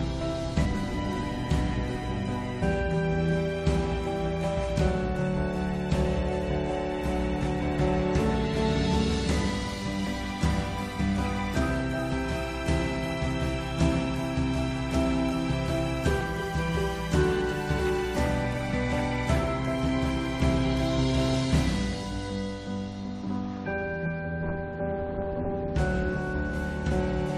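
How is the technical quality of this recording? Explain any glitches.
Compressed frames skipped at 0.64, 2.61 to 2.63, 16.2, 17.78, 23.26 and 25.44 s. The decoder drops whole frames, so the sound jumps ahead by roughly 50 to 200 ms. That fits multiples of a 23.2 ms frame.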